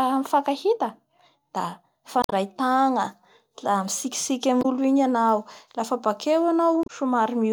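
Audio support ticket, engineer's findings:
Damaged data in a compressed stream. Corrupted bytes in the encoded speech; decoder misreads frames, loses sync, rescans for next frame header. Heard as short chirp or blip dropping into the speech at 2.22–2.33 s (about 110 ms), 4.59–4.65 s (about 70 ms) and 6.83–6.90 s (about 70 ms). Probable component: storage or transport layer ahead of the decoder, not the decoder itself.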